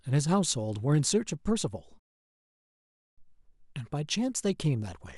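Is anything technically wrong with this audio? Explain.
Yes. A rebuffering stall runs from 1.99 to 3.18 s. Playback exhausted its downloaded audio and paused until more arrived, so the speech drops to silence for about 1.18 s, then continues exactly where it stopped. Unlike a dropout, nothing is skipped; time is only added.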